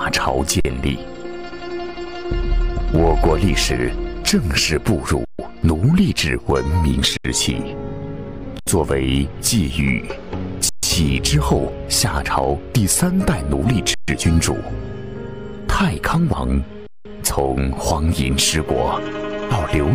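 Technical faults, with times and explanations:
0.60 s, 5.25 s, 7.17 s, 8.59 s, 10.69 s, 13.94 s and 16.87 s: underrun with held sample. The output buffer ran dry seven times. Each time the converter held its last value, so the sound freezes flat rather than clicking off. The stalls last from 46 ms up to 186 ms, with three of 139 ms. The shortest fits a 2048-sample gap. Essentially no audio was lost, and playback resumes where it stopped.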